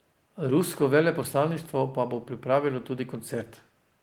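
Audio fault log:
No faults detected.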